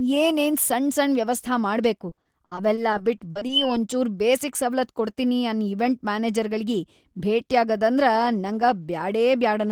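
Repeated packet loss from 2.09 to 3.51 s, after "ವ್ಯವಸ್ಥಾ ಮಾಡ್ಬೇಕು": about a dozen gaps, up to 60 ms each, are filled by extending earlier sound, leaving choppy, robotic speech.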